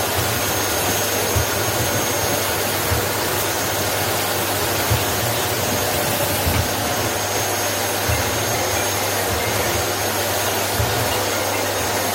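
Nothing goes wrong anywhere in this recording of everyday sounds; there's no technical fault to point to at any moment.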